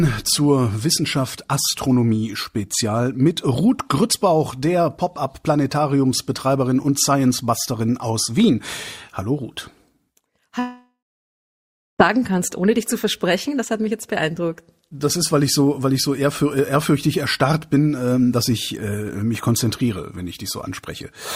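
From 10.59 to 12.01 s the sound stops being real: the last sound is carried on as a fading buzz or hiss, then about 1.0 s of silence follows. This is likely a long network dropout, and audio resumes with roughly 1.4 s lost.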